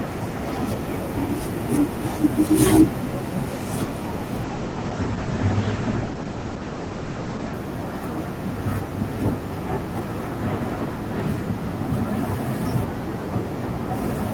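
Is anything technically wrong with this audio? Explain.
Yes, there are two faults in this speech.

From 4.45 to 7.59 s there is a call bitrate drop. The encoder's rate falls from 40 to 12 kbps, holding the low rate for about 3.0 s. Coarser coding makes the speech rough, and the audio band shrinks from 20 kHz to 8 kHz, so it turns muffled before recovering.

At 11.2 s a small jump in the sound is heard, likely a dropped buffer (overrun). The samples weren't read before being overwritten, so a sliver of about a millisecond or two vanishes and the surrounding audio is butted together without any gap.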